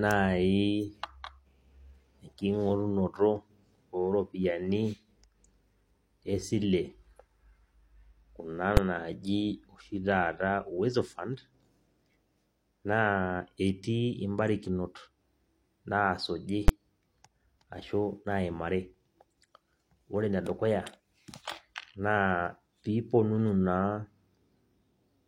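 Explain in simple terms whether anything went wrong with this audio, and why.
Two sharp bangs cut through the speech, at 8.77 s and 16.68 s. These come from invalid numbers at full scale: a calculation went wrong and the sound was forced to its loudest possible value for a tiny stretch, about 5 ms and 10 ms, too short to hear as anything but a crack.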